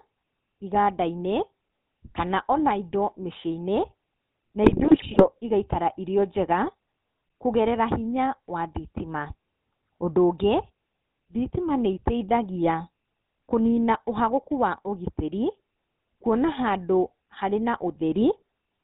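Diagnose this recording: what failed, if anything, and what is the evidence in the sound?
The codec stage failed audibly. The whole speech clip carries the GSM full-rate codec's gravelly, buzzy roughness, which fits the 13 kbps full-rate coder. It drives a vocal-tract filter with regularly spaced pulses, and because the excitation is so sparse, voiced sounds come out rasping instead of smooth. On a spectrogram, energy stops sharply at 4 kHz, and the harmonics look smeared and comb-like compared with clean speech.

The radio link stage also failed, with GSM bit errors from 4.64 to 5.27 s, just before "igaikara irĩ o". Corrupted filter, pitch and gain parameters reached the decoder, so the speech breaks into squawks, pops and gargling for about 0.6 s. The density of damage points to an error rate of a few percent. On a waveform, frame-length level spikes appear in this span. On a spectrogram, the same frames show distorted, jumping spectral shapes.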